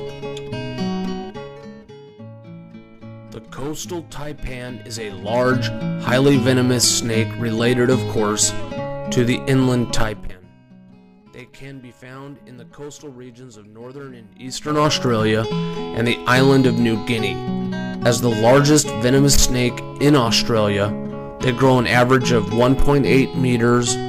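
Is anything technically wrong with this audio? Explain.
Yes. There is zipper noise during four level changes. The level drops from 1.04 to 1.84 s and rises from 4.84 to 5.64 s, each by about 15 dB, at around five steps a second. It falls from 10.0 to 10.4 s and climbs from 14.36 to 14.88 s, each by about 20 dB, much faster. The gain jumps in coarse 3 dB steps with no smoothing. Each jump clicks, so the moves sound ticked or zipped.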